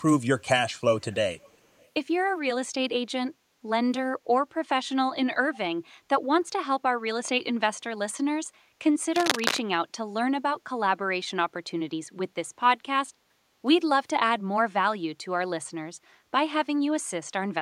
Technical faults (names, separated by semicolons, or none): echo leak; background gated by the echo canceller; cable scratch noise